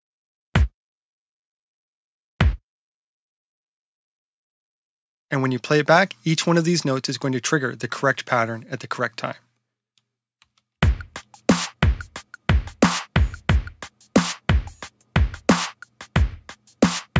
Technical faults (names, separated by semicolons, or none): none